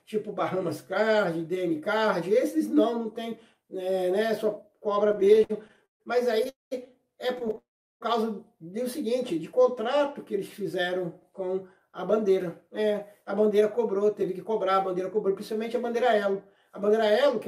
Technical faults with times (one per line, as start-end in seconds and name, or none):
5.07-6.02 repeated stalls (stutter)
6.49-6.73 call audio freeze
7.39-7.58 repeated stalls (stutter)
7.58-8.03 call audio freeze
9.33-10.06 jitter buffer slow-down
11.91-17.47 jitter buffer speed-up